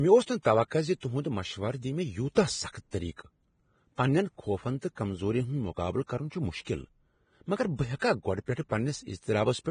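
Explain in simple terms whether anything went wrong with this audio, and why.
Yes, a couple of things went wrong. The whole recording sounds hissy and grainy, a bit muffled, with nothing above about 9.7 kHz. That points to Vorbis compression, likely at a low quality setting, which dropped the highest treble and turned fine detail into a sandy noise.

There are also three short bursts of pre-echo, a short hiss just before a sudden sound, making that sound's start soft and smeared. They occur at 1.00–1.03 s, at 2.35 s, and at 7.99–8.02 s. They happen because the compressor spreads its noise across a short chunk of audio, so some leaks into the quiet moment before a sharp attack.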